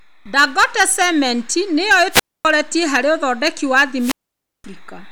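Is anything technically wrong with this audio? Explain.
Yes, there are two wireless microphone squelch dropouts in this speech. The first runs from 2.11 to 2.45 s, right after "cement nĩyo", with the audio muted for about 255 ms before it comes back on "harĩ ũthondeki wa". The second, from 3.98 to 4.64 s just after "harĩ ũthondeki wa", is longer, with a hole of about 528 ms. In both, the FM radio link faded, a little hiss crept up, and then the receiver's squelch shut the output off until the signal returned.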